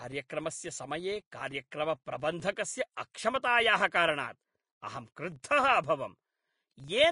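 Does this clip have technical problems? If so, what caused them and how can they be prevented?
Yes. Throughout the speech a 25 Hz buzz from a filter restarted on every block rises and falls with the level, unlike steady mains hum. Carry filter state across blocks.

Grainy, hissy treble with nothing above 10.5 kHz is plainly audible, likely from Vorbis compression at a low bitrate, about 32 kbps. A simple low-pass would sound dull, not rough. Encode at higher quality.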